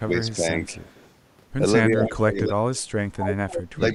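A speech recording in which the echo canceller, likely confused by both sides talking at once, turns the talker down: speech suppressed in double talk dips about 10 dB from 0.0 to 0.43 s, then falls up to about 30 dB in stretches between 1.84 s and the end. Residual loudspeaker pickup likely also gets through as echo leak: faint delayed copies about 194 ms late at 0.3 to 0.34 s and 0.73 to 1.07 s, and a much louder copy about 232 ms late from 2.03 to 2.15 s.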